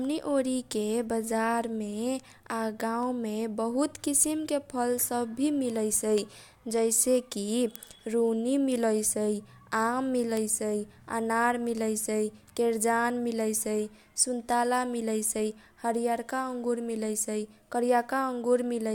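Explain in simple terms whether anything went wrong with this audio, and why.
Word clock ticks, 0.41 s to 18.76 s, roughly every half second: the receiver's clock drifts from the sender's, so single samples get dropped or repeated.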